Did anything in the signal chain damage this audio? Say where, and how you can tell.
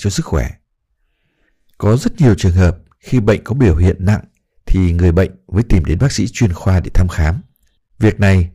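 Yes: the speech has a harsh, crackly fuzz on louder syllables throughout, which is hard clipping, with peaks driven about 11 dB past full scale and flattened.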